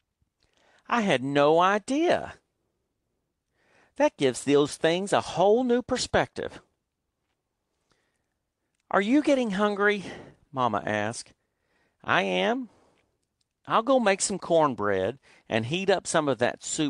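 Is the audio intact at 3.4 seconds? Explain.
Yes, the speech at 3.4 seconds plays through without any audible dropout, click, distortion or other break.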